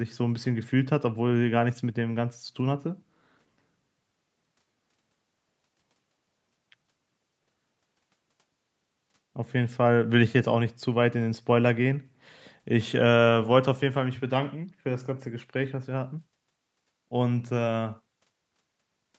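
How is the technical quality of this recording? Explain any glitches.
The technical quality holds up, and there are no glitches to explain.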